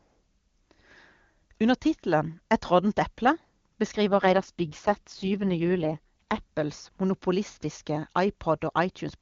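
Speech carried over the AMR wideband (HD Voice) codec, with an AMR rate drop from 4.08 to 6.43 s. The band and continuity hold, but the voice turns rough and synthetic, which points to the codec stepping down from 23.85 to its 6.6 kbit/s mode before recovering.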